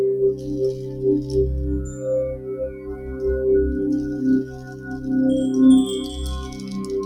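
A noise suppressor built for speech has been left running on this material, so we've got a noise suppressor applied to music or sounds across the whole clip. It's treating sustained tones and ambience as noise, and the gain keeps swinging by something like 10 dB. Onsets punch through fine, but anything held or decaying gets pulled down, so the whole thing pumps and thins out rather than sitting steady.

You can pin down specific spots where sound is cut by the noise suppressor. There's a dip of about 6 dB from 0.34 to 0.49 s and another of about 6 dB from 0.73 to 1.04 s. Then it drops about 7 dB from 2.37 to 2.52 s, and about 7 dB again, for longer, from 2.70 to 3.22 s. There's about 6 dB from 4.43 to 4.90 s, and finally about 5 dB from 6.46 to 6.63 s. Each time, the steady or fading sound is pushed down while the attack mostly comes through.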